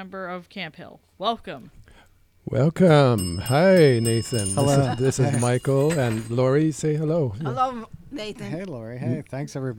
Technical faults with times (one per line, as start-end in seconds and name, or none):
none